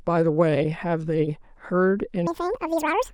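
From 2.27 s to the end, the speech is read two samples at a time (double speed): pairs of samples are treated as single frames, so the audio plays at twice the rate and jumps up an octave, twelve semitones higher.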